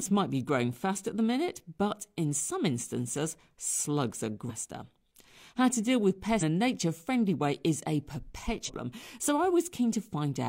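Speech with compressed frames skipped at 4.46–4.51 s after "some instances slugs are", at 6.38–6.43 s between "to deal with" and "a nature friendly way", and at 8.64–8.70 s. Roughly half a second, a fifth of a second and half a second of audio vanish, which points to whole 42.7 ms codec frames being dropped. Each jump shows as a narrow vertical smudge where the harmonic pattern breaks off abruptly.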